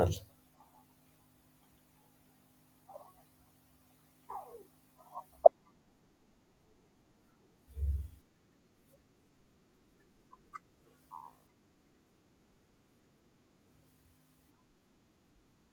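At 5.39 s the audio passes through a crude rate conversion that lasts to the end: samples are linearly interpolated onto a new grid with no anti-aliasing filter, and the pattern of the error fits a 44.1 kHz to 48 kHz change. The uncorrected interpolation error forms shifted, inharmonic copies of the speech, sitting roughly 50 dB below it, heard as a faint gritty, inharmonic fizz that rides along with louder and brighter speech sounds.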